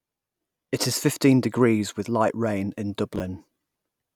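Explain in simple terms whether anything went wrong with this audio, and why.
Chunks out of order at 3.16 to 3.20 seconds: one 11-millisecond slice of the speech arrived three slices late, so it plays in the wrong place, causing a brief jumble.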